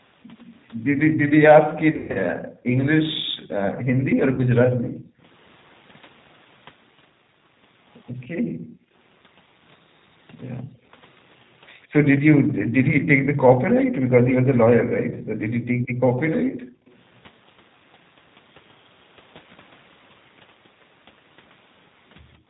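Speech runs through the G.729 codec at 8 kbit/s for its whole length. The codec rebuilds each frame from a vocal tract filter, a pitch predictor and a few pulses, so the audio is cut off above 4 kHz and the speech is plainly rough and synthetic. VoIP packet loss concealed by the speech codec occurs from 1.91 to 2.17 s, where 180 ms went missing across 240 ms, with the longest gap lasting 120 ms. The decoder extrapolated from its last pitch and filter, stretching the sound into a fading buzzy tone or coloured noise, and the speech stays weak and distorted for a moment after packets return. A shorter loss at 4.35 to 4.40 s drops 30 ms, which fits a single lost packet.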